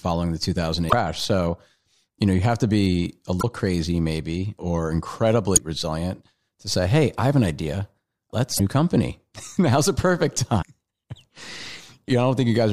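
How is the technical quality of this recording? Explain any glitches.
The recording is marred by five short glitches from damaged data in a compressed stream, at 0.88–0.93 s, 3.38–3.44 s (between "have to be a" and "crazy maybe or"), 5.53–5.60 s (just before "resilient to say hey"), 8.55–8.60 s and 10.61–10.64 s (right after "a perfect"). At each point, corrupted bytes made the decoder misread frames and lose sync until it found the next header. The result is a brief chirp or blip, about 25 to 75 ms long, breaking into the speech.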